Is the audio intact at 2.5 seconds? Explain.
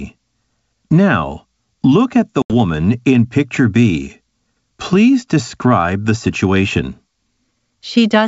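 No. From 2.42 to 2.53 s an abrupt 80 ms silent hole cuts the speech, which then returns slightly distorted: packet loss on an ADPCM call, where the decoder's predictor lost sync with the sender's.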